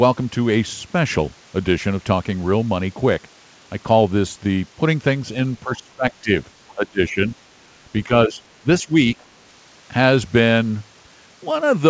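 Speech that dips and thins out in pieces, by roughly 10 to 20 dB, at 5.64–6.06, 6.22–6.31, 6.75–7.24, 8.06–8.39, 8.58–8.95 and 9.15–9.26 s, is speech suppressed in double talk, likely an echo canceller ducking the talker while the far end spoke. At 5.73–5.77 s, a faint scrap of the other side's voice leaks through, about 25 dB below the speech, likely loudspeaker echo the canceller missed. The G.722 call path stops everything above 8 kHz.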